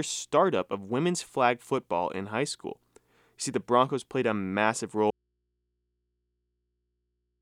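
An audio dropout to a faint residue begins at 5.10 s and runs to the end. The sound cuts off abruptly mid-flow, leaving only mains hum roughly 50 dB below the earlier level, likely because the source was lost while the downstream input stayed live.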